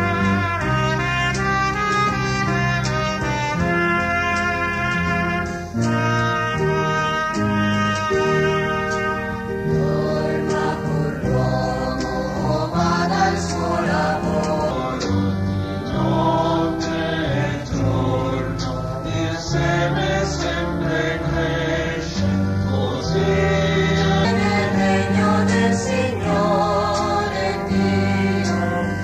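From 14.71 s to 24.25 s a section at the wrong speed plays back at 0.839 times its original rate, so the sound becomes slower and sits roughly three semitones lower, with pitch and tempo dropping together at the boundary and recovering abruptly at 24.25 s. The likely cause is a playback or editing stage running that segment against a mismatched clock, stretching its timing and lowering every frequency by the same ratio.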